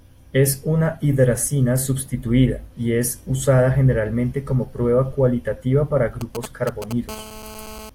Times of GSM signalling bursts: 6.21-6.93

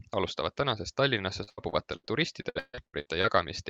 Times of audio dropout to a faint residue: none

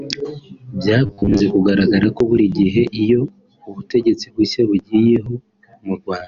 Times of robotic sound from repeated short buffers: 1.06-1.41

